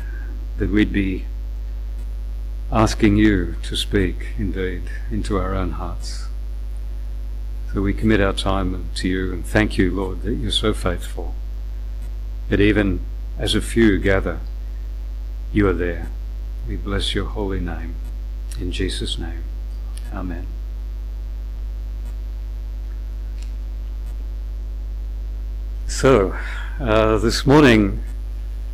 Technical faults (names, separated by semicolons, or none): hard clipping